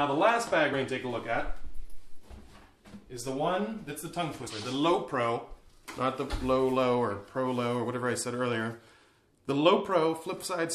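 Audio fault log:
0.72 s and 4.46–4.50 s, compressed frames skipped: the audio jumps forward twice, losing around 50 ms at the first spot and around 70 ms at the second. Whole compressed frames never reached the output, either because they were missing from the stream or because the decoder rejected them as corrupt. The skip is a multiple of the frame length.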